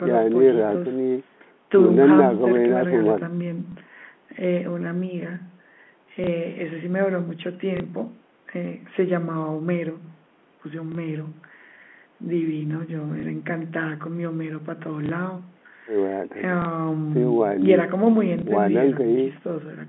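Single packets went missing at 3.72, 6.24, 7.77, 10.92, 13.2, 15.06, 16.62 and 18.39 s, and the receiver filled each 30 ms gap by replaying the previous packet. The repeated chunk doesn't join the speech smoothly, so every spot gives a small blip.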